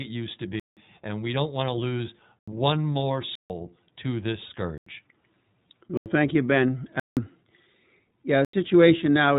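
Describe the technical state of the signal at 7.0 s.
A block of digital silence runs from 7.00 to 7.17 s, about 170 ms, which fits an 8192-sample buffer that was not filled in time. The speech drops abruptly to silence and returns with no fade, heard as a short hole.

The iLBC codec also shapes this moment, as it does the whole clip. Each 20 ms frame's excitation is coded on its own, which fits the 15.2 kbps mode. Nothing above 3.8 kHz survives, and the speech carries a plainly audible rough, synthetic edge.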